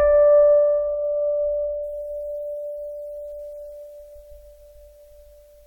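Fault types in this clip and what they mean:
There are no fault types in this music clip.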